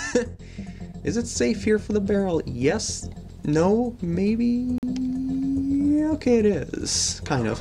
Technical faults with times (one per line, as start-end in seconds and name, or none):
4.78-4.83 gap between stream segments